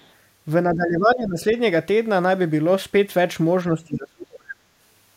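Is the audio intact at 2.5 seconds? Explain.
Yes, the speech at 2.5 seconds comes through intact, with no dropout, click, distortion or other fault at that moment.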